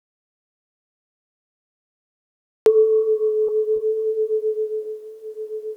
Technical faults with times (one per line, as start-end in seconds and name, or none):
0.00-2.66 audio dropout to silence
3.76-3.90 short stall from a late packet